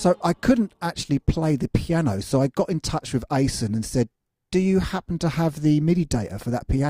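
No technical faults can be heard anywhere in the recording, and the signal stays intact and consistent throughout.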